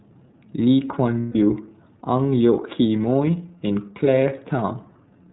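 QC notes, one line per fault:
throughout: iLBC codec, narrowband coding with nothing above 4 kHz and plainly audible rough, synthetic texture, consistent with 30 ms frames at 13.33 kbps.
1.20–1.36 s: lost iLBC frames, about 150 ms concealed by repeating the last pitch cycle with noise, giving a held, buzzy vowel before speech recovers at once.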